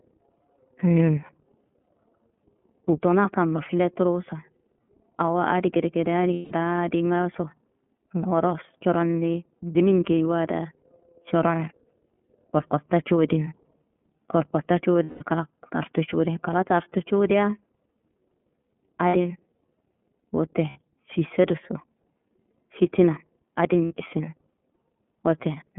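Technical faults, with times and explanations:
Throughout: iLBC codec. The speech sits in a narrow telephone band of about 150 Hz to 3.4 kHz, sounding boxy and plainly rough, with a slightly synthetic buzz. Each 30 ms frame's excitation is coded on its own, which fits iLBC's 13.33 kbps mode. On a spectrogram, energy stops sharply at 3.4 kHz and thins below 150 Hz, and the harmonics look smeared. The waveform shows no fine detail above the band.
6.33–6.52 s, 15.03–15.24 s, 19.07–19.15 s, 20.70–20.79 s, 23.85–23.93 s: lost iLBC frames. The first two gaps last 180 ms, which fits six 30 ms frames; the other three last 60 ms. In each gap the decoder fills in by repeating the last pitch cycle mixed with noise, heard as a held, buzzy or breathy vowel that fades in the longer gaps. On a spectrogram this shows as flat, evenly spaced harmonic stripes; the waveform shows a repeating cycle. The speech recovers at once afterwards.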